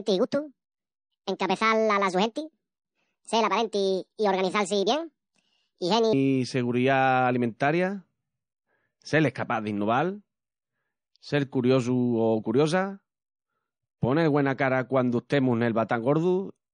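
A section at the wrong speed runs from 0.0 to 6.13 s: the speech plays 1.56 times too fast, sounding high and hurried, raised roughly seven semitones, likely from a playback clock mismatch. MP3 compression is plainly audible throughout. Nothing is left above 9.6 kHz, and watery, swirling artefacts smear the speech, likely from encoding at a low bitrate around 40 kbps.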